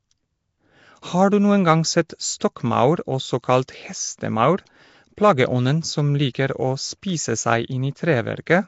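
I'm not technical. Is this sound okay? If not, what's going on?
No. The speech sounds rough and hissy from start to finish. It also has a smeared, underwater quality. This is likely Nellymoser compression, from an old Flash-era codec that squeezes speech hard. It splits the sound into short blocks and spends very few bits on each. Weak frequency bands get no real detail and are filled in with noise, which makes the hiss. The clip also has nothing above 7.7 kHz, so it sounds dull.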